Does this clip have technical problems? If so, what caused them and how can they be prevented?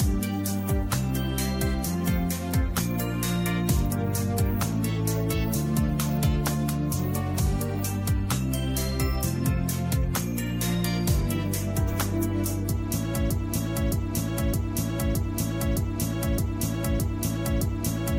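Yes. The stream likely stalled and kept resending its last fragment, a broken-record loop repeating one 0.62 s piece eight times from 13.30 s to the end. Prevent it with a watchdog that detects a stalled buffer and flushes or restarts playback instead of replaying old data.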